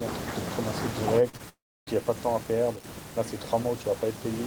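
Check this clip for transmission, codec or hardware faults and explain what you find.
The clip has three transmission faults in speech, all clustered between about 1.29 and 1.89 s.

Short concealed packet loss occurs at 1.29–1.35 s and again at 1.37–1.41 s, with roughly 40 ms and 20 ms missing. The receiver bridged each gap by extending the preceding sound, then crossfaded back, producing a brief smear or wobble.

A long network dropout follows from 1.49 to 1.89 s, with about 0.38 s of audio lost. The sound first continues as a decaying buzz or hiss, then goes silent for about 0.29 s before speech resumes mid-stream. The likely cause is an extended interruption in packet delivery.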